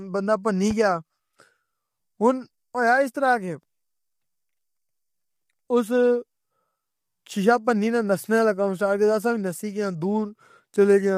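From the start, the speech sounds rough and grainy, with noise filling the gaps between harmonics and a thin, synthetic top band. This is plainly audible low-delay AAC compression, likely AAC-ELD, whose short frames resolve pitch poorly at a low bitrate, which fits about 32 kbps.

From 0.71 to 0.74 s, a single loud pop stands out, peaking a few dB above the speech. A sudden voltage pulse, likely from a plug, switch, static or driver glitch, was added to the signal. It lands as a sharp pop while the speech carries on underneath.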